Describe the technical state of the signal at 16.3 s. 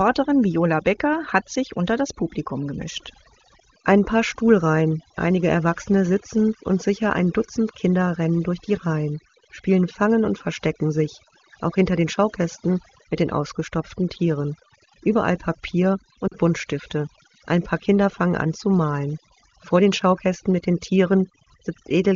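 Lost AMR speech frames occupy 16.28 to 16.35 s, a gap of about 40 ms that fits two consecutive 20 ms frames failing their checksum. The decoder fills the hole by repeating the last good pitch and vocal tract parameters at a falling gain, so the sound briefly smears and dips in level rather than cutting cleanly. In this wideband stream the concealment attenuates quickly, and the speech returns weak or rough for a moment just after 16.35 s.

Overdone noise removal is also present here, as it is across the whole clip. The noise reducer is set too aggressively, so it pulls individual frequency bands far down whenever their level sits close to its noise estimate. Low-level parts of the speech are removed along with the background. The result is near-silent gaps scattered with twinkling specks. The AMR-WB codec itself, at 23.85 kbit/s, contributes little or no audible damage beneath these faults.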